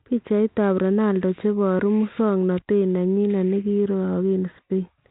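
Nothing goes wrong in this speech, which is carried over G.726 ADPCM at 32 kbit/s with only the light coding character that path brings.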